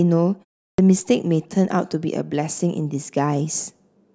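Clipped start after a pause at 0.73 s: after about 0.37 s of silence, the output path was slow to wake, swallowing 54 ms so speech begins abruptly.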